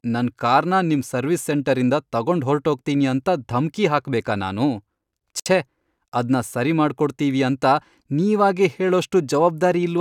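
Separately encoded pieces of this speech recording were joined without trimming each encoder's start-up delay and final-frame padding, leaving a gap at the join. The speech breaks with a 62 ms gap, from 5.40 to 5.46 s, its edges smeared so the silent part is shorter, then resumes exactly where it stopped.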